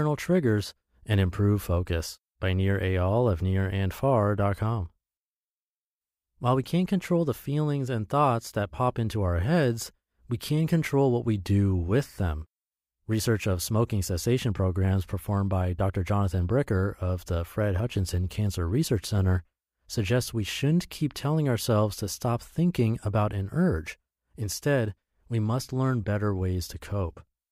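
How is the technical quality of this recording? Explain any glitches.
No glitches can be heard anywhere in the speech, so there is nothing to explain.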